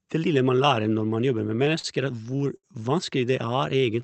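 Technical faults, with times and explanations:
1.47–2.66 s, repeated stalls (stutter): just after "lærer når man jobber" the jitter buffer ran dry eleven times, each gap filled by holding the last sound, the longest 72 ms, 200 ms in all. Unlike packet loss, nothing is cut out; the sound drags.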